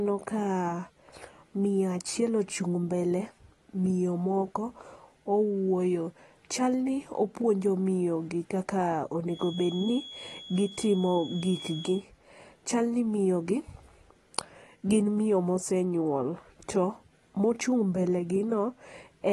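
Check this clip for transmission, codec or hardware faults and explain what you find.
One fault runs through the whole speech clip: AAC compression. Throughout, the audio sounds dull and smeared, with warbling, fizzy sibilants, likely from AAC-LC coding at a bitrate around 32 kbps. The encoder quantises each frame's frequency lines coarsely and discards the top. A spectrogram shows a flat ceiling at 12.5 kHz.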